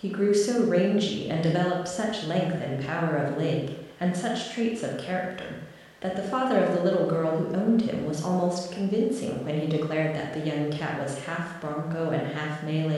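No technical faults detected.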